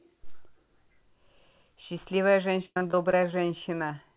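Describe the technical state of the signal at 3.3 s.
At 3.3 s the speech sits inside a burst of repeated packet loss (robotic sound) running from 2.63 to 3.34 s. Ten separate holes open in quick succession, the longest about 101 ms, and each is patched by stretching the preceding sound, so roughly a third of the span is synthetic fill. Unlike a single dropout, the gaps keep recurring, giving a choppy stutter with pieces missing within audio already band-limited to 4 kHz by the call path.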